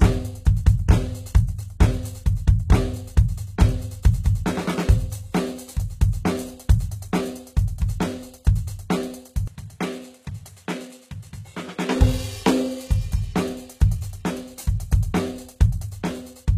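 Throughout the music, the treble sounds synthesized rather than captured: cymbals turn gritty and metallic, and nothing is left above 14.9 kHz. This is likely HE-AAC compression at a rate that suggests around 20 kbps, with the upper band rebuilt from copied lower harmonics that fail to line up.

From 9.48 s to 11.96 s, the sound abruptly drops about 10 dB, dulls with nothing above 13 kHz, and gains a faint new noise floor, with no gap at the change. This is likely the input switched to a poorer device, a narrower and noisier path, before the original input returns.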